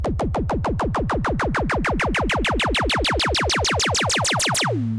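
No technical faults are audible in this recording of sounds.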